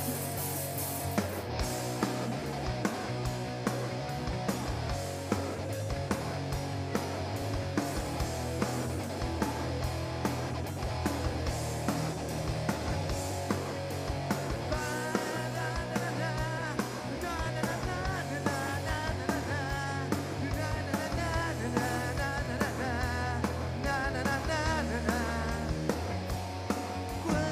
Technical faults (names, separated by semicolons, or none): overlapping chunks